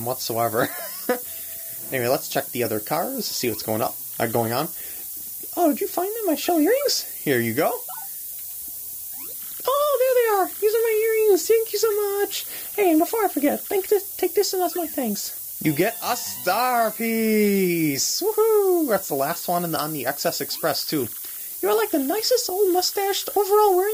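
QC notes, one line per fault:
throughout: low bit depth with noise shaping. The sound fits about 5 bits, with requantisation error pushed upward into a steady thin hiss nearly as loud as the signal. A spectrogram shows a bright noise floor rising toward the top band.
13.03–13.14 s: corrupt frame decoded. A chirpy burst peaking around -15 dBFS spans a few damaged compressed frames, with energy misplaced in frequency. It appears as a short smeared vertical patch on the spectrogram.
15.09–15.16 s: compressed frames skipped. The audio jumps ahead a few tens of milliseconds as frames drop out. The waveform shows a discontinuity at the join.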